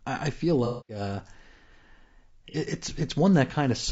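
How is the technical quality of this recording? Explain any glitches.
The technical quality is noticeably compromised. A codec coloration runs through the whole recording, and two dropouts interrupt the speech.

Low-delay AAC compression, throughout: the speech sounds rough and grainy, with noise filling the gaps between voice harmonics and a thin, somewhat synthetic top end. This is likely a low-delay AAC-ELD codec running at a low bitrate, consistent with about 32 kbps. Its short frames resolve pitch harmonics poorly, and at this low bitrate the damage is plainly audible.

AAC frame loss with concealment, 0.65–1.00 s and 2.51–2.56 s: the first gap comes right after "I I feel" and lasts 240 ms, which fits roughly eight lost frames. The second is a single 30 ms loss. In each case the decoder rebuilt the missing stretch from the last good spectrum, with scrambled phase or interpolated energy. 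The long gap smears into a noisy wash, while the short one is a brief phasey blur.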